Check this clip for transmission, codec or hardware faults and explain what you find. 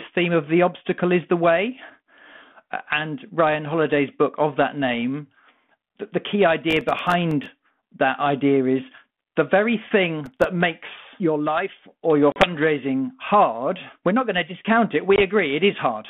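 Two kinds of fault show up in this telephone-band G.726 call at 32 kbit/s, which tops out around 3.5 kHz.

Processor overload crackle hits from 6.71 to 7.46 s and again from 10.26 to 10.44 s, just before "makes your life or". Runs of tiny, very short buffers miss their deadlines and drop to silence, so you hear gritty crackling tear through the speech.

Packet loss on the ADPCM call comes at 12.32 s, right after "your life or your", with 40 ms gone, and at 15.16 s, after "going to discount it", with 20 ms gone. Each hole is a hard-edged silence. Because the decoder's predictor and step size have drifted out of sync with the sender's, the speech comes back with some distortion before it settles.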